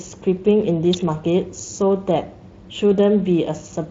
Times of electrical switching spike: 0.93

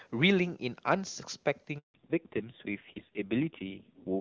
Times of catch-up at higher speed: none

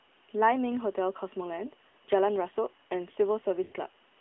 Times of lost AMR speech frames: 1.88-1.94, 3.64-3.73

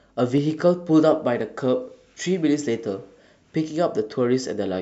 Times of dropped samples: 0.38, 1.41

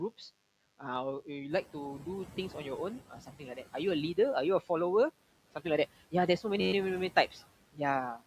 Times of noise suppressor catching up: 1.50-1.69

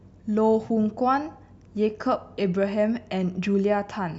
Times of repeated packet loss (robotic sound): none

